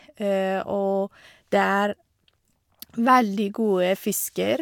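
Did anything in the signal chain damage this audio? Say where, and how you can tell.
No, nothing in the chain has audibly damaged this speech recording; there is no stage to point to and no event to time.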